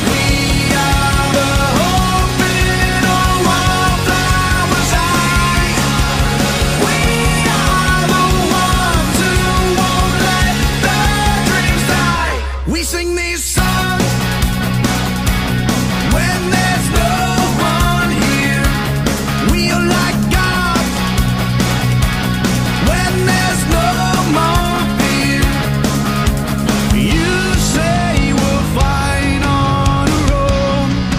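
Brief skips land at 6.19, 12.18 and 18.18 s. Each is an overlap between stream segments. Two 6-second segments claim the same moment, and the player trims the shared part. Between 9 and 16 milliseconds of sound vanish, so the waveform jumps.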